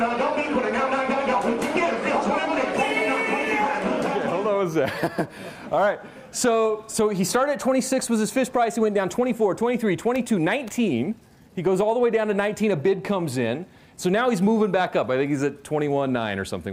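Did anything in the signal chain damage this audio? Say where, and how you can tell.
No, no stage of the chain has left any audible damage on this audio.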